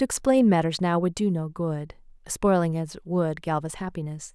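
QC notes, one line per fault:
Nothing to flag here, the speech comes through without any technical trouble I can hear.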